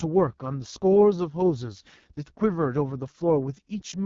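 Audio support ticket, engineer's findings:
AMR wideband (HD Voice) codec, whole clip. Speech rough, raspy; heavy codec damage. Consistent with lowest AMR-WB mode, around 6.6 kbit/s. Coarse pulse excitation through vocal-tract model. Spectrogram: hard ceiling near 7.1 kHz, smeared noise-like band from 6.4 kHz up, blurred harmonics below.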